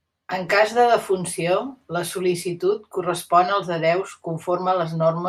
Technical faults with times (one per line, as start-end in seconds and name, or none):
none